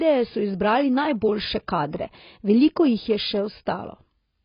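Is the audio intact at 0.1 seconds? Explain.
No. At 0.1 s, as throughout, the speech sounds dull, smeared and fizzy, likely from heavy AAC compression at a bitrate around 16 kbps. The encoder discards everything above 5.1 kHz, so a spectrogram shows a hard, flat ceiling there.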